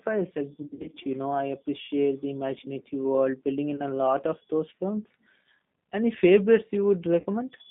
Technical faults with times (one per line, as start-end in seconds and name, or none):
0.00-7.70 G.729 codec
0.62-0.96 VoIP packet loss concealed by the speech codec
3.76-3.81 VoIP packet loss concealed by the speech codec
7.20-7.26 VoIP packet loss concealed by the speech codec